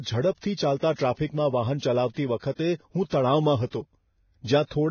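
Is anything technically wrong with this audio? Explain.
Yes. Throughout, the speech is hissy and grainy with nothing above 6.6 kHz, likely heavy Vorbis compression at a bitrate near 18 kbps; a spectrogram shows a hard ceiling and speckled treble.

Pre-echo comes before attacks at 0.78, 2.39, 2.55 and 3.70 s. Block-spread quantisation noise leaks 27 to 40 ms early, visible as short hiss preceding each onset.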